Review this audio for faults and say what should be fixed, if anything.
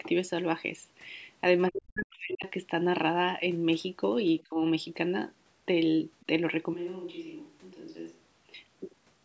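Speech suppressed in double talk: with both sides talking at once, the echo canceller likely could not tell the talker from the loudspeaker echo and turned both down. The talker's speech drops by roughly 40 dB from 1.69 to 2.46 s, and by about 25 dB from 4.44 to 4.61 s. A stronger double-talk detector that keeps near-end gain up while the far end is active would prevent this.

Other side's voice leaking through: the echo canceller likely left some of the loudspeaker playback in the microphone signal. At 6.2 s a brief scrap of the far-end voice comes through, faint at about 35 dB below the talker. Better residual echo suppression, or a headset instead of an open loudspeaker, would prevent this.

Switch to a distant microphone: the close microphone's signal likely failed or dropped out, and a microphone further away took over from 6.73 to 8.54 s. The sound turns roomy and hollow with less bass, falls about 10 dB in level, and picks up room noise at about 30 dB below the speech, with abrupt changes in and out. 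Monitoring the close microphone's connection and fixing it as the input source would prevent this.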